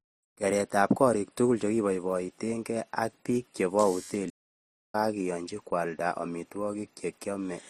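From the very start, the speech carries a layered quality. There's the texture of MP3 artefacts with Opus artefacts on top. That mix most likely comes from transcoding between lossy codecs, something like MP3 at around 44 kbit/s re-encoded to Opus at 48 kbit/s. Opus ends up spending bits on the MP3 artefacts while adding its own, so you hear both sets of damage at once.

Right after "chekibaibatenken ak bik chebo", at 4.29 s, the audio just drops out mid-flow and stays silent until 4.95 s, roughly 0.64 s of nothing. That's a playback stall. The player most likely ran dry of data or had its thread held up, so the output went quiet until it caught up.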